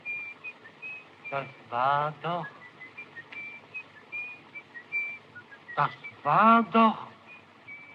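No technical faults can be heard anywhere in this audio.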